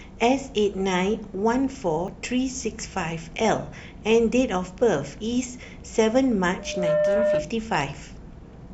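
Speech with two faults. At 2.08 s and 7.35 s the sound jumps ahead, losing about 30 ms and 10 ms. This is likely a dropped buffer (overrun). From 6.59 s to 7.57 s a loudspeaker feedback squeal appears. A 603 Hz tone swells over roughly a third of a second to about 5 dB above the speech. The microphone is hearing its own loudspeaker.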